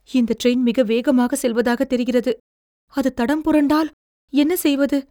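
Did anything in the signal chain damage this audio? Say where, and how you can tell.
No, nothing in the signal chain audibly damaged this speech recording at any stage.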